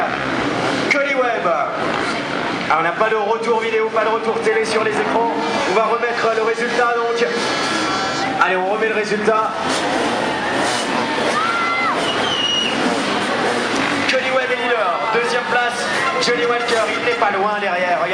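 Nothing technically wrong turns up anywhere in this audio, so there are no problem spots or causes to point to.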